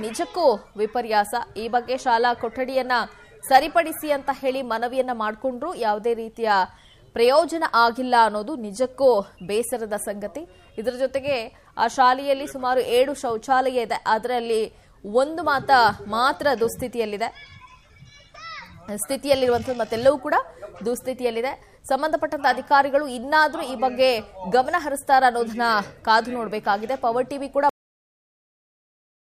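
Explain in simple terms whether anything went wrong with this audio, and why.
Something did go wrong at the very end. At 27.69 s the sound stops abruptly, partway through, and is followed by about 1.6 s of dead digital silence until the file ends. This is a cut-off end: the final stretch of audio was never written into the file. A natural ending or a fade-out would trail away gradually. Here there is no decay at all, just sound one instant and total silence the next.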